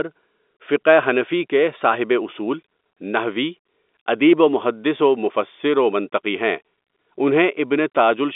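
Nothing here needs fixing: it's speech carried over an ordinary G.711 telephone line, so the sound sits in the usual narrow phone band of roughly 250 Hz to 3.6 kHz, and that's just how the line works.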